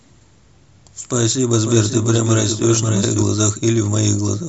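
From 1.53 s to 3.23 s the speech carries a doubled audio track: a second full-band copy trails about half a second behind, roughly 5 dB quieter, dry and without decay, switching in and out abruptly. Two copies held out of step is the likely cause.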